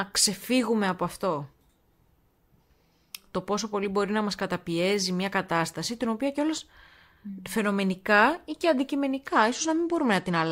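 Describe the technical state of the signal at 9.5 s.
At 9.5 s there's a Bluetooth SBC bit pool drop, running from 9.28 s to the end. The starved encoder dulls the treble and adds grit, which fits a bit pool falling to 13.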